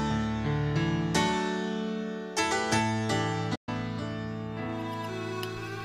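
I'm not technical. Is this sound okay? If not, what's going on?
No. At 3.55 s the sound stops dead and stays silent until 3.69 s, a playback stall. This is likely the player running out of data or being briefly blocked, so nothing reached the output until it recovered and the sound carried on.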